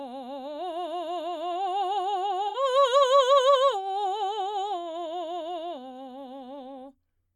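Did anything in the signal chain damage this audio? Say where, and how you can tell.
Yes. The damage is at the codec stage: AAC frame loss with concealment in the music at 2.48 to 2.56 s. For about 64 ms the texture turns smeared and noisy and phasey rather than dropping out, which fits roughly three lost frames. The decoder had no data for that span and rebuilt it from the last good spectrum with scrambled signs or interpolated energy, so the music's shape carries through while its detail briefly blurs.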